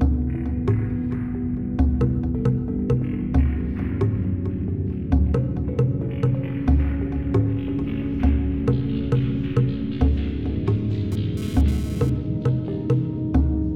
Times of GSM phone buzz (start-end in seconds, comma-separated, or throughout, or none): 11.12-12.10